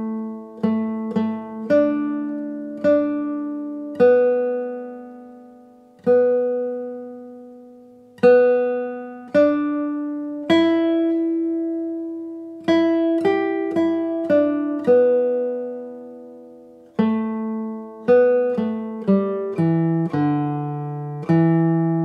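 No technical faults can be heard anywhere in the clip. Nothing in the capture or playback chain draws attention to itself at any point.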